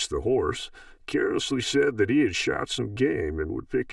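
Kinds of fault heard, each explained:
Channel delay (comb filtering): one channel runs roughly 3 ms behind the other, and summing them to mono cancels shared content at evenly spaced frequencies, starting near 200 Hz, so the speech sounds hollow and phasey throughout the clip.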